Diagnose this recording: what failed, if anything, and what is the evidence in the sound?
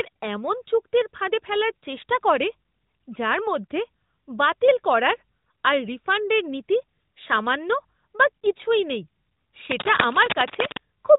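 Lost AMR speech frames, 8.41 to 8.46 s: a brief dip or warble in the speech, fitting one 20 ms frame dropped on the network and concealed by the decoder.

Cable scratch noise, 9.71 to 10.77 s: uneven scratching, nearly as loud as the speech, likely from a worn cable or connector in the analogue wiring with fluctuating contact resistance.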